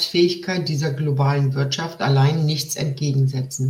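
No dropouts, clicks, distortion or timing errors turn up anywhere in the recording.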